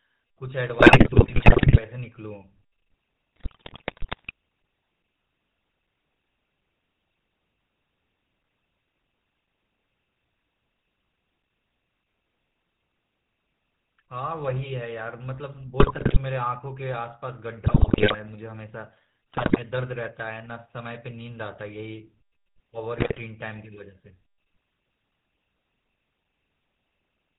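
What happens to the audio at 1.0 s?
Right around then, from 0.78 to 1.82 s, you're hearing GSM bit errors. The decoder is being fed corrupted data, consistent with roughly 8 percent of bits flipped across what sounds like about 50 frames. When the filter, pitch and gain values come through wrong, the spectrum warps and the level jumps frame by frame, so the speech breaks up into squawks, pops and a gargly churn for that second or so.

Underneath that, and for the whole clip, there's the GSM full-rate codec itself. It models the vocal tract and excites it with a sparse, regularly spaced pulse train, and the sound fits the 13 kbps full-rate coder. Everything above 4 kHz is gone, and the damage is plainly audible as that familiar buzzy, gravelly roughness on the speech.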